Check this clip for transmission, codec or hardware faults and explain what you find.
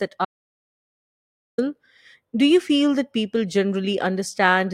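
There is one fault, an audio dropout to silence. From 0.25 to 1.58 s the speech cuts off abruptly and returns mid-flow, leaving 1.33 s of dead digital silence with no room tone. The likely cause is a lost input, such as a disconnected device or failed link, while the recorder kept writing zeros.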